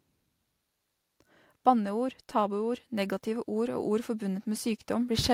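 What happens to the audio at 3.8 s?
At 3.8 s the speech is partway through an automatic gain rising, which runs from 2.36 s to 4.78 s. The automatic gain control judged the input too quiet and is lifting its gain slowly, by about 4 dB over those two and a half seconds. The voice and the background noise swell together, which separates this from a talker moving closer to the microphone, where the voice alone would grow louder.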